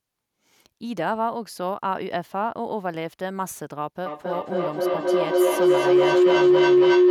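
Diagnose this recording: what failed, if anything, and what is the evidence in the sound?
Feedback howl sets in at 4.06 s and runs to the end of the clip, peaking about 10 dB above the speech. The failure sits in the acoustic path around playback. Sound from a loudspeaker re-enters a microphone on the same call, gaining level on each trip, so the repeats grow and collapse onto one tone near 400 Hz, pulsing at roughly 300 ms. A spectrogram shows a bright narrow line near 400 Hz, and the waveform envelope swells and throbs well above the speech.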